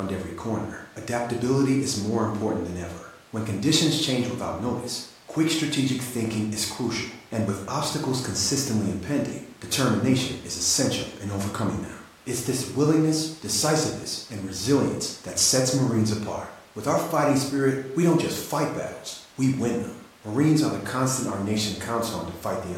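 No technical faults can be heard anywhere in the speech.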